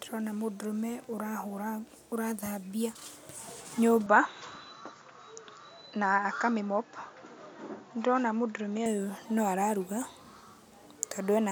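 Speech, and from 4.06 s to 8.86 s the top end vanishes above 7.2 kHz and a faint new noise floor comes in, with no gap and no real level jump, then clears. That's most likely an input switched to a poorer device mid-recording.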